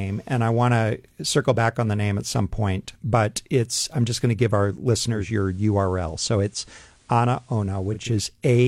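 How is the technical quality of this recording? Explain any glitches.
The recording has one glitch, a digital radio blending to analogue. From 5.09 s to 8.14 s the receiver loses its digital stream and cross-fades over 261 ms to the FM broadcast, then returns. That section gains faint hiss roughly 35 dB down and drops about 2 dB. The hiss and the smooth cross-fade set it apart from a simple codec bandwidth drop.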